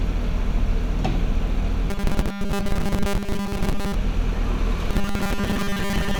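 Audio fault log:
1.90–3.94 s and 4.90–6.19 s, robotic sound from repeated short buffers: the sound turns into a rigid, metallic buzz pinned at 200 Hz, loosely tracking its contours. Likely cause: new audio arrived too seldom, so a 5 ms slice was looped while most of the real audio was skipped.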